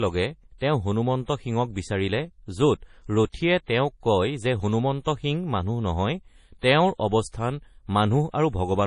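Across the whole clip the speech sounds watery and swirly, with a metallic chirp on the s sounds and nothing above 10.5 kHz, so the treble stops at a hard ceiling. This is likely MP3 compression running at a low bitrate, something like 32 kbps. With so few bits the encoder cuts off the top band and drops weak frequency lines, which flicker in and out from frame to frame and give the heavy, shifting texture.

Pre-echo appears at 0.58 s, 3.30 s, 5.02 s, 6.61 s and 8.31 s. At 5.02 s it falls after "কয় যে" and before "সিং মানুহ নহয়", and at 6.61 s it comes after "সিং মানুহ নহয়". Each time, a short hiss runs ahead of a sharp onset by 25 to 44 ms, and the attack lands soft and blurred. The codec spreads its coding noise across a whole transform block. When a sudden attack sits late in that block, noise sized for the loud part also fills the quiet moment just before it.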